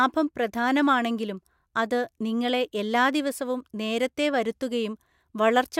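Nothing in this recording stands out as a technical fault at any point, so there's no trouble to walk through here.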